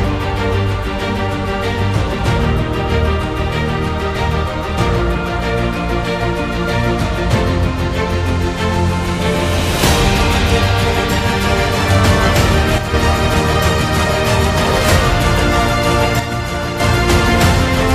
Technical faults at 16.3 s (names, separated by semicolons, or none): one channel drops out